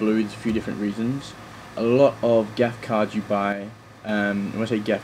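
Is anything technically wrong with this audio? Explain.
Yes. From 3.52 to 4.09 s, one channel drops out. For just over half a second, the level falls abruptly by about 6 dB, then recovers just as suddenly. The likely cause is that one side of the stereo signal was lost while the other kept running. When the two sides are summed to mono, anything common to both is halved, which produces the 6 dB dip. Anything carried only by the missing side vanishes for the duration of the gap.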